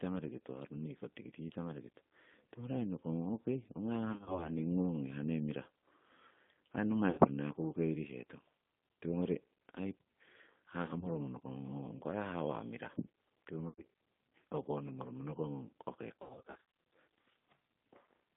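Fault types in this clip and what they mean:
G.729 codec: The whole clip is narrowband speech confined to about 150 Hz to 3.6 kHz. It sounds slightly rough and synthetic because the codec rebuilds each frame from a vocal tract filter and a sparse pulse excitation rather than sending the waveform itself. The damage is plainly audible, which fits an 8 kbit/s coder such as G.729A. A merely band-limited phone line would lose the same treble but keep a clean, natural texture, without this buzzy, artificial grain.
VoIP packet loss concealed by the speech codec: Short gaps occur at 4.12, 7.11, 10.99, 13.68 and 16.21 s. The decoder fills each one with a stretched continuation of the preceding sound that fades, and the speech stays weak or distorted briefly afterwards. The worst stretch, from 16.21 to 16.58 s, is roughly 380 ms of repeated bursts up to 60 ms long. Plain dropouts would leave silence or clicks rather than this smeared fill.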